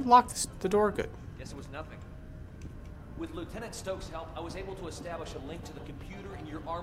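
No faults are audible anywhere in the recording.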